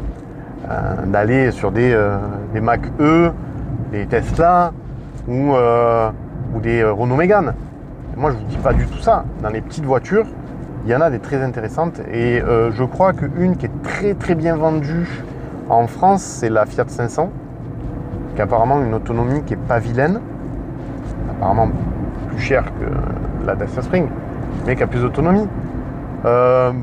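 Nothing in the audio stood out as a technical problem on listening.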